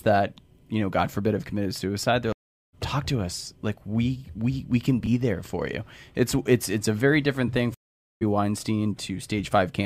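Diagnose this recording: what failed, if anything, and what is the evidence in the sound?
Twice the speech drops out entirely and then picks up further along, with a piece of it simply gone. The first gap runs from 2.32 to 2.74 s, after "have committed suicide they're": about 0.41 s of silence, then "talk to us" arrives roughly half a second later than it should. The second, after "a very different thing", spans 7.74 to 8.23 s, about 0.47 s of silence, skipping roughly 0.4 s. This is a stream reconnect at the network stage: the connection broke, the player went silent, then rejoined the live stream with a fresh decoder.

Between "we we we can" and "there for you", at 5.04 to 5.07 s, there is a brief jumbled moment. This is chunks out of order, a fault in the driver or buffer stage, or in network delivery. A single 10 ms chunk came in late and was played two chunks after its proper place. 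No audio is lost, but the sequence is scrambled, and this creates three hard joins.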